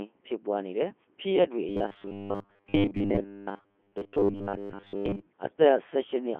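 The speech in this clip has gone through the Codec 2 vocoder throughout, at its highest 3.2 kbit/s mode, and the damage is heavy. The codec keeps no waveform. It sends only pitch, voicing, energy and a coarse spectral envelope, and the decoder rebuilds the voice from a bank of sine waves. The result is confined to a telephone-like band of 200 Hz to 3.4 kHz, and the voice sounds buzzy and synthetic, with its natural texture replaced by a mechanical tone. From 1.69 to 5.28 s there is robotic sound from repeated short buffers. The likely cause is fresh audio arriving too rarely, so playback kept looping the most recent fragment while most of the real audio in that stretch, roughly two-thirds or more, was skipped. The loop imposes a rigid 100 Hz buzz, which fits a 10 ms buffer. The voice becomes a flat, metallic drone that only loosely follows the speech.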